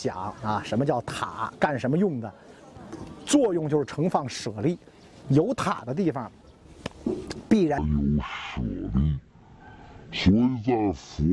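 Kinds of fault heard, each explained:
Wrong sample rate: from 7.78 s to the end at 11.33 s the audio runs at half speed and drops a full octave (12 semitones), because the samples are read out at half the pace they were captured, which fits 48 kHz material played at 24 kHz. On a spectrogram every component slides down to half its frequency and the upper region thins out. On the waveform, each cycle and envelope stretches to twice its length.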